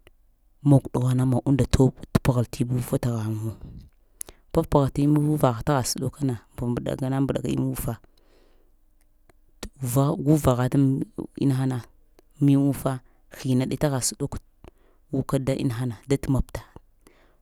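No technical faults can be heard anywhere in this speech recording. Nothing in the audio calls for a timestamp or a fault description.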